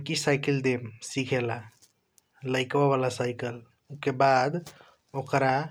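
No technical faults are audible anywhere in the speech.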